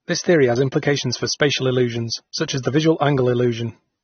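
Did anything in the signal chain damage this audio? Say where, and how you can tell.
Yes, at the codec stage. The whole clip stops dead above about 6.3 kHz with the smeared texture of a starved encoder, yet it's a 320 kbit/s MP3. That's likely low-bitrate audio saved at a high bitrate, something like a low-rate AAC re-encoded, which can't restore what the first pass removed.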